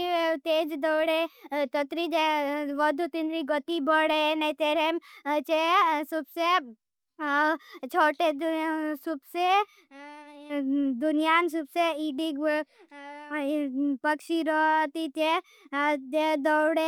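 Nothing is technically wrong with this speech recording.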